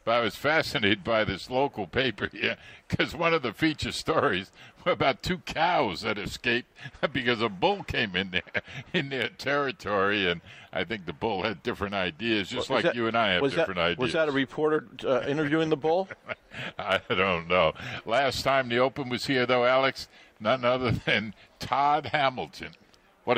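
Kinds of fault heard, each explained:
No faults can be heard anywhere in this audio. Nothing in it calls for a fault to be named or explained.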